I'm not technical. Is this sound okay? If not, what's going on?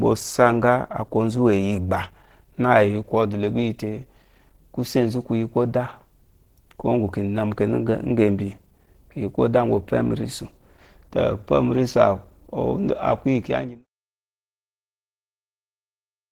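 No. Throughout, the speech sounds hoarse and muffled, which is likely Opus compression. It is rough rather than watery or swirly, and the fade-out ending near 13.9 s is smooth.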